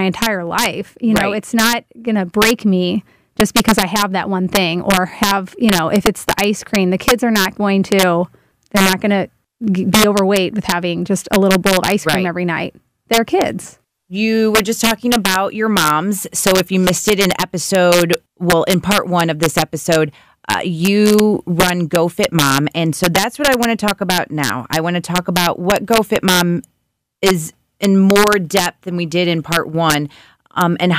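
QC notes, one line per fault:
throughout, integer overflow: the loudest peaks of the speech crack hard, like something snapping. The level was pushed about 2 dB past full scale and never limited, so wherever a sample went over, the integer wrapped around to the opposite extreme instead of sitting flat at the ceiling. Only a small fraction of samples, well under one percent, cross that line, but each one jumps the full range in an instant. That's why the cracks are so much harsher than ordinary clipping.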